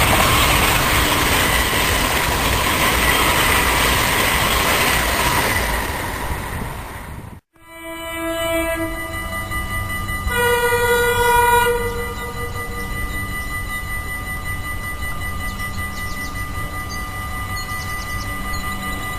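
The audio has two faults. At 2.02 s there is a skip ahead: roughly 0.7 s of sound is missing. Playback jumps forward with no gap. From 4.98 s to 7.20 s the jitter buffer speed-up is heard. Playback runs at 111% with unchanged pitch. Short pitch-period slices were cut, roughly a third of a second in total, to drain an overfull buffer.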